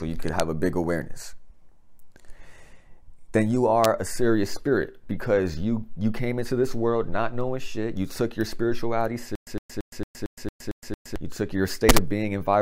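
Integer overflow cracks at 0.40 s, 3.84 s and 11.89 to 11.98 s. Peaks wrap to the opposite sign instead of limiting, giving harsh snaps. Between 9.35 and 11.16 s there's a stutter with silent gaps: a 111 ms burst repeats eight times, each followed by about 116 ms of dead silence, likely a stalled stream replaying its last fragment.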